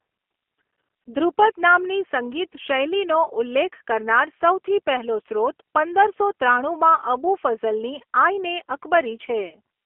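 Throughout the clip the speech sounds thin and slightly rough, with a faintly synthetic edge and no brightness above about 3.4 kHz or body below about 300 Hz. This is plainly audible G.729 codec damage, and the character fits G.729A at 8 kbit/s. The codec does not keep the waveform. It rebuilds each 10 ms frame from a vocal tract filter, a pitch predictor and a few pulses, so fine detail is lost and replaced by an approximation.

From 9.50 to 9.55 s the sound briefly smears into a held, buzzy tone or coloured noise that fades, then takes a moment to recover its normal clarity. This is VoIP packet loss concealed by the speech codec. About 20 ms of audio, which fits a single lost packet, never arrived. The decoder filled the gap by repeating its last pitch and filter at falling gain. Because each frame depends on the one before, the distortion lingers slightly after real data returns.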